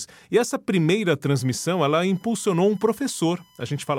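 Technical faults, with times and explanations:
1.38 s to the end, USB whine: Current drawn by the USB bus in 1 ms frames leaks into the audio path through shared power or ground, so from just after "essa primeira" a steady, fixed-pitch whine rides under the speech. Its fundamental sits at 1 kHz, with the strongest energy at the 3 kHz harmonic. It stays roughly 35 dB below the speech, so it is faint but persistent.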